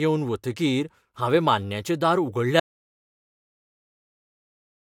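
The input was likely lost partway through this speech clip, so an audio dropout to silence runs from 2.60 s to the end: plain silence, with no room tone left.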